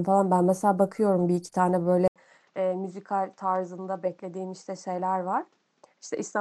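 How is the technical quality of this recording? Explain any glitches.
From 2.08 s to the end, the speech turns dull and boxy, with nothing above 8 kHz, drops noticeably in level by around 10 dB, and picks up a faint new noise floor well beneath it. An 80 ms silence marks the change. The likely cause is the input switched to a poorer device, such as another microphone or a headset's call profile, which brings its own narrower band, tone, gain and background noise.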